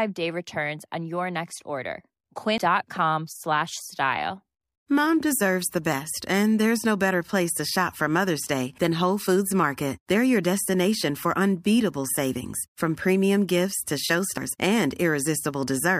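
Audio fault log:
2.58 s, damaged data in a compressed stream: just after "on your next order" the decoder loses sync and resumes at the next frame.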